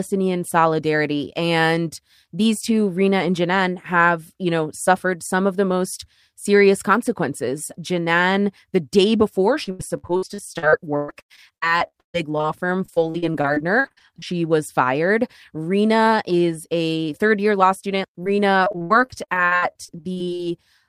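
Repeated packet loss (robotic sound) appears at 9.63–12.46 s after "the day before", 12.86–14.24 s before "was fired", and 18.24–20.41 s after "third year law student". Lost audio is patched by repeating the last sound, giving choppy speech with pieces missing. The spectrogram shows smeared, static harmonic blocks, with holes up to 137 ms.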